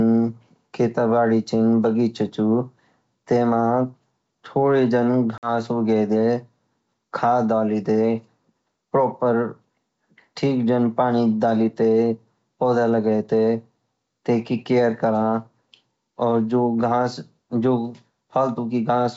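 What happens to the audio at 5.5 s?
Around 5.38 to 5.50 s there is packet loss on an ADPCM call. About 50 ms of audio drops to silence, which fits roughly five short packets going missing. Because the decoder's predictor and step size lose track of the sender's during the gap, the speech comes back slightly distorted before settling by about 5.50 s. On a waveform this shows as a hard-edged flat hole. A spectrogram shows an abrupt blank vertical band with a smeared restart.

Gain pumping also runs through this moment, as it does across the clip. The gain swings by about 5 dB, pulling down under louder sound, giving a squashed, breathing quality. This is likely from gain set too high ahead of a fast limiter. On a waveform the envelope looks flattened, with noise-floor swells between peaks. A spectrogram shows the background band brightening and dimming in step with the speech.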